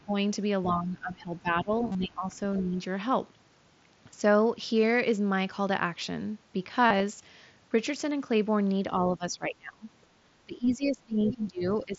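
Speech suppressed in double talk occurs first at 0.02 to 0.15 s and again from 0.64 to 2.35 s. The voice sinks by roughly 15 dB, likely because the echo canceller mistook overlapping talk for loudspeaker echo. Concealed Bluetooth headset packet loss falls inside that stretch at 1.87 to 1.95 s. About 60 ms is missing across 75 ms, and runs of up to 30 ms are filled by repeating recent waveform. These come through as a brief buzzy, held tone with a slight warble on recovery. Suppression returns mildly at 2.60 to 2.76 s, with a dip of only a few dB. Packet loss recurs at 6.87 to 7.03 s, where about 75 ms is patched across 150 ms with the same buzzy fill. Suppression then deepens: at 9.08 to 9.87 s the level falls by something like 25 dB, and from 10.46 s to the end it falls by around 20 dB. Within that last stretch, the other side's voice leaking through appears at 11.25 to 11.34 s. A short scrap of a second talker, roughly 10 dB below the main voice, likely slips past incomplete echo cancellation.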